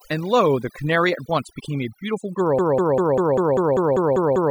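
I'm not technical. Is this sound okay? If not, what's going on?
No. Right from the start there's overdone noise removal: a cleanup filter pushed too hard has carved away the background and some quieter parts of the speech too, leaving little twinkly specks where the background noise used to be.

Then at about 2.59 s it turns into a broken-record loop: a tiny slice, about 0.2 s long, plays over and over, ten times, right to the end of the clip. The likely cause is the player or stream stalling and resending its last piece, so whatever should have followed is lost.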